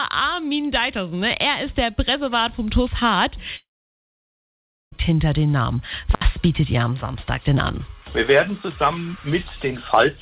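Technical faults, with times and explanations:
3.56–4.94 s, long network dropout. The sound does not stop cleanly. The last moment of audio is stretched into a buzzy tail that quickly fades. Near-silence follows for about 1.3 s. Audio returns at 4.94 s, but roughly 1.36 s of material never arrives and is simply skipped. The likely cause is a run of lost packets. The receiver keeps guessing from the last good audio before giving up and muting. The band stays capped near 4 kHz, which fits a narrowband call codec.
6.13–6.24 s, intermittent contact. The signal breaks for about 66 ms. Each edge of the gap carries a sharp crackle. That crackle comes from a connector touching and parting, so the signal jumps abruptly instead of fading. Between the two clicks only faint hiss remains. The line is electrically open there, leaving just the noise of the input stage. Because the break is so short, it reads as a brief crackly stutter rather than a full silence.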